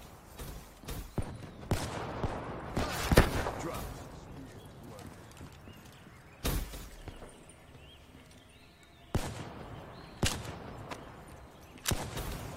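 Listening through, nothing in the audio stood out as a technical fault.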